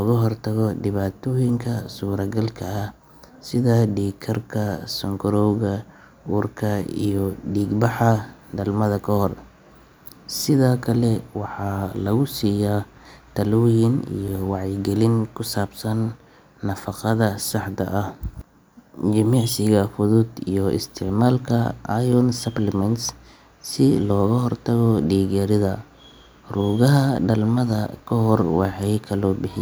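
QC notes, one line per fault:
No fault to note.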